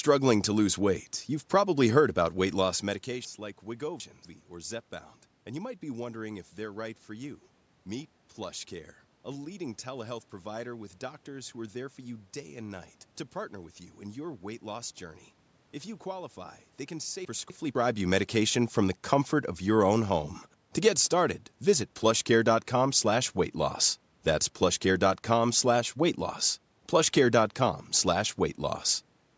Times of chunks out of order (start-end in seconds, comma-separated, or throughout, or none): 3.25-4.25, 17.25-17.75